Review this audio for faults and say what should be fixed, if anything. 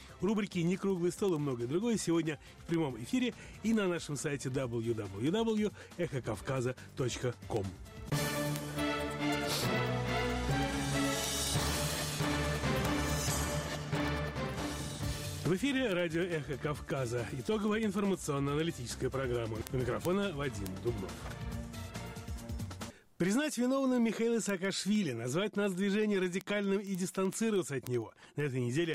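Word clock ticks run from 0.14 s to 28.94 s: sharp clicks of uneven strength at a steady rate of about one every 70 ms, some 400 in all. The receiving device is running on its own clock rather than locking to the sender's digital stream. The two rates differ by around 300 ppm, so they keep sliding past each other, and at each slip a single sample is dropped or repeated, producing a tick. To prevent it, lock the receiving device's clock to the incoming digital signal or to a shared word clock.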